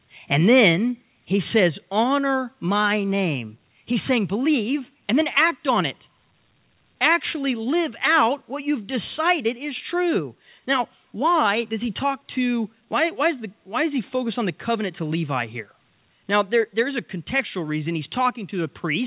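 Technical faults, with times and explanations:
1.02 s and 2.04 s, microphone volume stepped down: the whole sound, background included, drops abruptly in level, first by about 3 dB, then by about 2 dB. These steps are likely the call software lowering the input volume after judging the microphone too hot, over a call path band-limited to 4 kHz.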